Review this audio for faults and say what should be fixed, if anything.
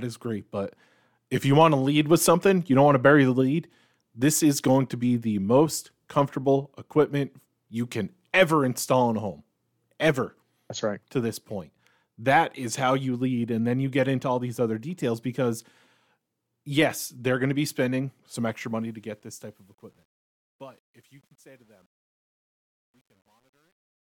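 After "going to be spending", the fade-out turns gritty from 18.31 s to the end at 24.17 s, at its worst from 20.08 s. This is truncation distortion on a fade: an undithered gain stage, consistent with a 10-bit path, chops the quiet tail into coarse square steps. Apply fades at full resolution and add dither whenever the word length is reduced.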